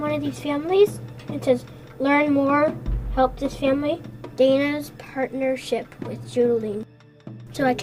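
From 4.74 s to the end, the resampler restarted on every block: each 20 ms block was converted on its own, likely from 44.1 kHz to 48 kHz, leaving an error at every edge. The result is a 50 Hz buzz that, unlike mains hum, disappears whenever the sound pauses.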